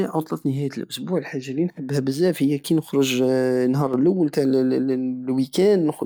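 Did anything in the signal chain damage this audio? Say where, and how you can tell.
Yes. From 3.87 to 3.94 s the speech drops abruptly by about 6 dB for roughly 66 ms, then returns at full level just as suddenly, with no fade at either edge. This is a one channel drops out fault. The likely stage is analogue wiring, such as an intermittent stereo connector or cable. When one side goes silent, the mono sum keeps only half of the material common to both channels, which gives the 6 dB step.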